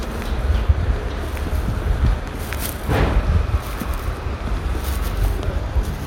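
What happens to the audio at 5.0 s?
Nothing goes wrong at 5.0 s; the sounds carry on intact through that moment.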